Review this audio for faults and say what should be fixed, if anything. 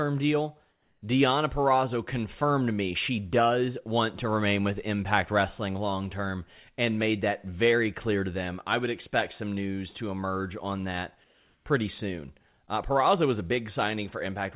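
Comfort noise in place of the background appears at 0.72–1.02 s and 11.24–11.66 s. The real background, about 44 dB and 40 dB below the loud parts, gives way to steady, featureless hiss at the same level, then about 1 dB quieter. The likely cause is discontinuous transmission: the sender paused and the receiver synthesised noise. A spectrogram shows smooth, uniform texture in place of the background's detail, still ending at 4 kHz like the rest of the narrowband audio. The waveform shows an even, flat fuzz. Turning off discontinuous transmission at the sender would prevent it.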